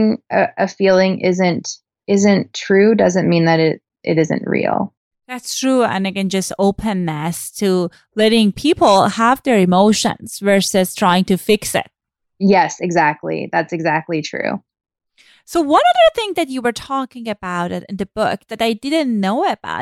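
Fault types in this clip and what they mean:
Careful listening to the speech turns up nothing that stands out.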